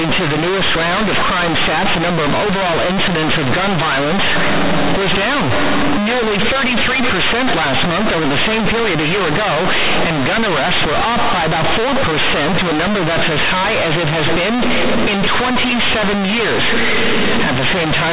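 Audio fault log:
throughout, companded audio read as linear: the speech was stored as mu-law G.711 bytes but is being played back as plain linear 8-bit samples, with no expansion step to undo the logarithmic scale. Every zero crossing of the speech now flings the output across roughly half its range, so faint passages come out as loud as strong ones and the waveform is badly bent, giving a harsh, buzzy roar and heavy noise through the pauses.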